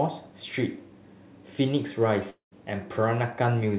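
It's a short speech clip with one real problem: from 2.3 to 2.53 s the sound stops, and what fills the gap is a fading smear of the last bit of audio that thins out into silence before the speech picks up again, with about 220 ms simply gone. That's the signature of a long network dropout, likely packets that never showed up, with the receiver's concealment covering the hole. The whole thing sits below 4 kHz, which fits a G.711 mu-law call path at 64 kbps.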